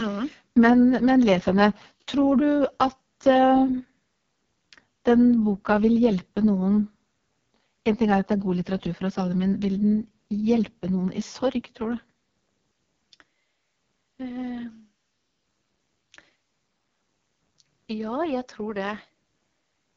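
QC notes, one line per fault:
Throughout: AMR wideband (HD Voice) codec at 6.6 kbit/s, one of its two lowest rates, leaves speech rough and raspy, with nothing above about 7.4 kHz.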